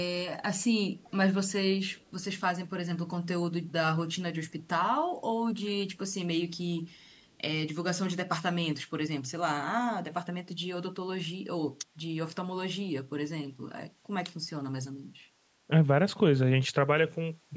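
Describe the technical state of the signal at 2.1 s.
At 2.1 s a faint echo leak is just ending. It spans 1.88 to 2.1 s: a delayed copy of the speech, trailing it by about 391 ms and sitting far below it in level. The likely cause is a loudspeaker on one side of the call whose echo canceller let some of the microphone pickup return down the line. On a spectrogram it appears as a weak, shifted ghost of the speech harmonics, capped at 8 kHz like the rest of the call audio. The waveform barely shows it.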